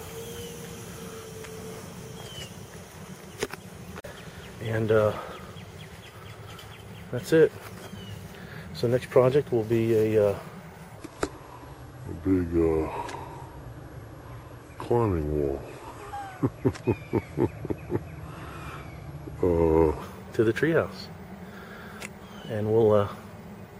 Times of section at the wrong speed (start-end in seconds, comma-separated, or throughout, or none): 10.97-20.02